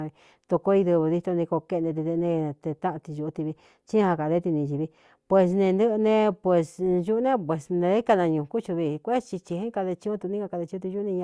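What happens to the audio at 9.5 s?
At 9.5 s the speech carries on without interruption and no fault can be heard at that moment.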